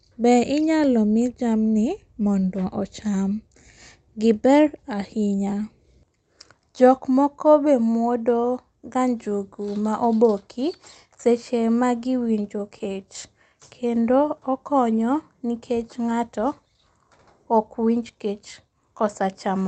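Between 11.79 and 12.97 s, scattered short gaps: about seven tiny packet losses, each around 10 ms, patched by extending the preceding sound, leaving brief ticks and smears. From 13.50 to 14.04 s, a jitter buffer slow-down: repeated pitch periods add 43 ms, so the speech plays at 93% speed, drawn out at unchanged pitch. Throughout, the call codec's band limit near 8 kHz is audible, which fits wideband Opus.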